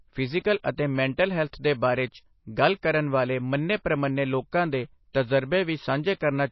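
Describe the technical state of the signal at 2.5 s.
MP3 compression damage is present at 2.5 s and across the whole speech clip: the treble stops dead above about 5.8 kHz, and weak frequency content flickers between frames, giving a watery, swirly texture with metallic s sounds, likely from a low bitrate near 24 kbps.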